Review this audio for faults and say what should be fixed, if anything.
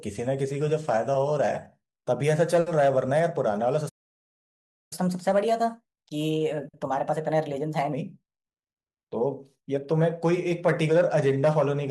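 A playback stall occurs at 3.89 s. The player most likely ran out of buffered data or had its output thread blocked, so nothing reached the output until it recovered. The speech cuts off mid-flow and the clip falls completely silent for about 1.02 s, until 4.93 s.

A catch-up at higher speed follows immediately, from 4.93 s to 7.93 s. Having fallen about a second behind, the player works through its backlog by resampling the audio at 1.15 times normal speed. Because resampling changes rate and pitch together, the speech for those three seconds sounds hurried and raised by roughly two semitones. At 7.93 s both speed and pitch drop back to normal.

A deeper playback buffer, with the audio thread protected from blocking work, would prevent the stall, and a time-stretching catch-up would recover the lag without shifting pitch.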